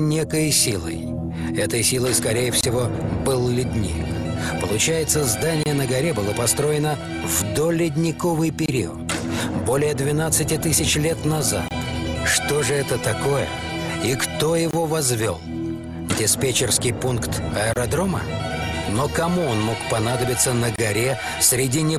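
At 2.61, 5.63, 8.66, 11.68, 14.71, 17.73 and 20.76 s the sound stops for 25 ms. This is a gap between chunks: silence was inserted at each join between 3 s chunks. Unlike dropouts, nothing is missing, and the hard-edged holes recur at strictly even spacing.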